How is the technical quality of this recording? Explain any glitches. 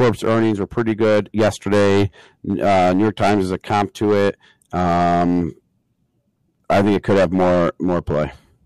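The recording is compromised by hard clipping running through the whole speech clip. The signal is driven about 14 dB beyond what a stage in the chain can pass, so roughly a tenth of the samples have their peaks sliced flat. Those squared-off tops generate high harmonics, heard as a harsh fuzz on every louder syllable.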